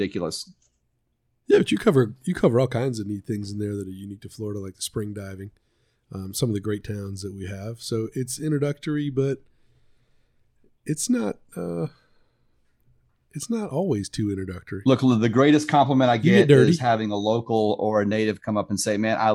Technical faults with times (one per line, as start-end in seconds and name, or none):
none